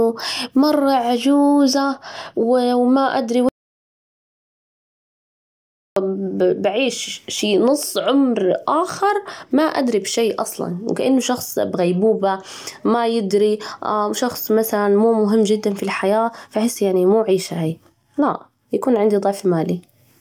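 At 3.49 s the speech cuts off abruptly mid-flow and the track falls to silence, with no room tone or background hiss left underneath, until the voice resumes just as suddenly at 5.96 s. About 2.48 s of speech is simply missing. This is an audio dropout to silence, likely caused by the input being lost for that stretch, through a disconnection, failed link or mute, while the recorder kept writing silence.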